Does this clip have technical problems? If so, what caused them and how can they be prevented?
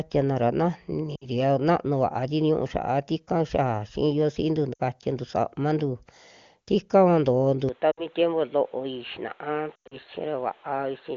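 Yes. Lost AMR speech frames cause short breaks at 1.16–1.26 s, 4.73–4.80 s and 7.91–8.06 s, each about 60 ms of missing audio, which fits three 20 ms frames. A longer cluster at 9.76–9.97 s loses about 140 ms scattered over 160 ms, with the longest unbroken gap about 100 ms. When radio errors corrupt a frame, the decoder reuses the last good pitch and vocal tract settings at falling gain. Each dropout therefore sounds like a smeared, fading warble. In this wideband stream that fade is quick, so the 100 ms run falls almost to silence before the sound returns briefly weak. A stronger radio link or better error protection prevents this.

The input switched to a poorer device at 7.69 s and stays there to the end. Without any gap, the sound turns duller and boxier, with nothing above 4.2 kHz, where the 23.85 kbit/s AMR-WB stream had carried content up to 7 kHz. The audio also becomes a few dB quieter, and a new noise floor appears roughly 30 dB below the signal. 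The likely cause is the system moving from the original microphone to a narrower-band input such as a headset's call profile. Locking the input device for the whole recording prevents this.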